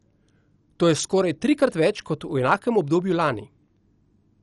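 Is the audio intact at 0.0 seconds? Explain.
No, the speech at 0.0 s, and throughout, is dull and gurgly with nothing above 11.3 kHz, likely from MP2 compression at a low bitrate. Starved of bits, upper sub-bands switch off and flicker, so a spectrogram shows a hard ceiling with patchy, blocky bands beneath.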